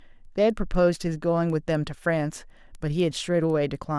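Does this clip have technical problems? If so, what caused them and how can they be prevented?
Yes: a resampler restarted on every block, converting 48 kHz to 24 kHz in separate 250 ms pieces, so each block edge carries an error heard as ticks at exactly 4 Hz. Unlike dropouts, nothing goes missing, and the ticks follow the speech, stopping in pauses. To prevent it, run one continuous resampler that carries its filter state from block to block.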